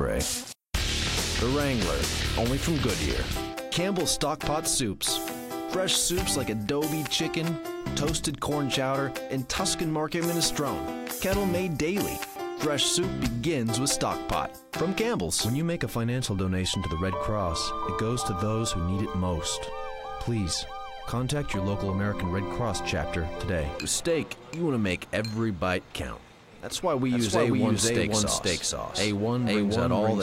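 A slower second path likely recaptures the audio from 27.1 s onward: a doubled audio track, with an equally loud copy about half a second behind.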